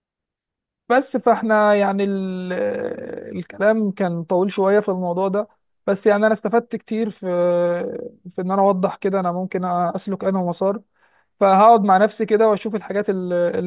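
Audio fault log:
No faults heard anywhere in the speech.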